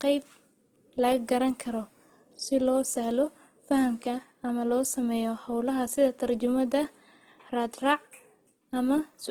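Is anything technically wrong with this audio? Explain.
Yes. Across the whole clip, Opus compression, likely running in its CELT music mode at a low rate that fits about 16 kbps, fills starved bands with folded or noise-like content instead of leaving gaps. The speech stays full-band to roughly 20 kHz but sounds plainly grainy, rough and noisy.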